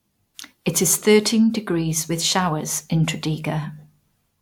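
No technical faults can be heard anywhere in the recording; the speech signal stays continuous and intact throughout.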